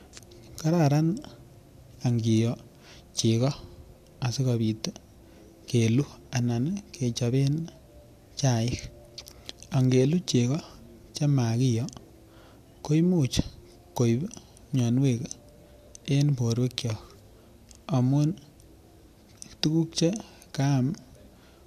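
From start to finish the speech has nothing above about 14.3 kHz, and the top end has that smeared, swirly quality you get from a lean lossy encode. It's likely a case of low-bitrate audio saved at a high bitrate: something like a 64 kbit/s AAC pass first, then re-encoded to a roomy MP3. The second encode adds almost nothing of its own, but it can't bring back the detail or the band the first one threw away.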